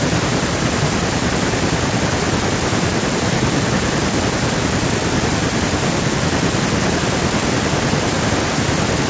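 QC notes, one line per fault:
No faults were found in the speech. The call microphone processing is working as expected, with the lowest bass trimmed and nothing heard above 8 kHz.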